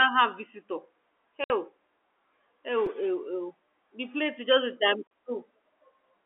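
Packet loss filled with silence cuts a 60 ms hole into the speech from 1.44 to 1.50 s. Packets never reached the receiver, and it played silence in their place rather than concealing the gap. The gap's length fits three 20 ms packets. The sound stops dead and restarts abruptly, with hard edges against the telephone-band speech, which runs from 300 Hz to 3.5 kHz.

A repeated buffer appears at 2.86 s. Fresh audio was late reaching the output, so the device replayed its last block twice more. That block is about 5.8 ms long, which fits a 256-sample buffer. With such a short block, the repeat is heard as a brief buzzy click rather than a stutter, and the sound simply resumes afterwards with essentially nothing missing.

Packet loss filled with silence returns from 5.07 to 5.11 s, a 40 ms dropout that points to two lost packets, again with hard edges.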